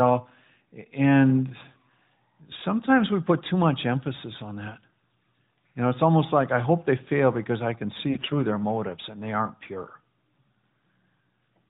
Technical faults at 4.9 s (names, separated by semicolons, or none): none